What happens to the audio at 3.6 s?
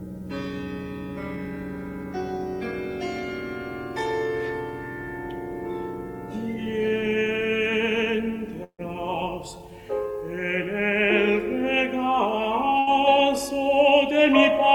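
Nothing goes wrong at 3.6 s; the audio passes through that moment intact, with no audible fault.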